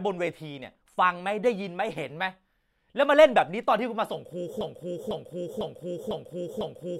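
From 4.61 s to the end, a broken-record loop sets in: one 0.5 s slice of speech repeats exactly, five times back to back, replacing what should follow. A stalled player or stream is likely resending its last fragment. Unlike an echo, the repeats neither fade nor overlap.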